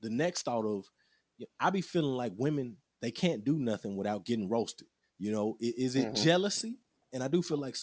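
Aliasing runs through the whole clip. The speech was brought down to a lower sample rate without an anti-aliasing filter, which fits a drop from 48 kHz to 16 kHz. Content above the 8 kHz fold point mirrors back into the band at unrelated frequencies, landing roughly 20 dB below the signal. Sibilants come out gritty and metallic, and the spectrum stays dense right up to the 8 kHz edge.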